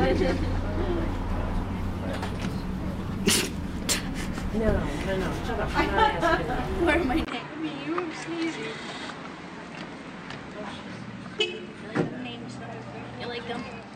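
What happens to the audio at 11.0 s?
At 11.0 s the sound is duller and slightly quieter than in the first half. The top end is gone, with nothing above about 8.9 kHz, the level sits roughly 5 dB lower, and a faint new noise floor lies around 50 dB below the signal. This began at 7.25 s, after a 20 ms gap, and lasts to the end. The cause is likely an input switched to a poorer device, a narrower-band microphone with its own tone and noise.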